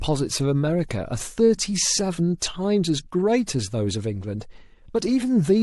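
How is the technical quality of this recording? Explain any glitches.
The recording has one codec fault, a pre-echo at 2.39 to 2.42 s. Just before a sharp onset in the speech, a brief hiss rises about 21 dB above the quiet background for roughly 25 ms. The encoder's transform block, about 36 ms long, spans both the silence and the attack, and it never switches to shorter blocks. The quantisation noise sized for the loud onset therefore spreads backwards into the gap. The attack sounds softened and smeared.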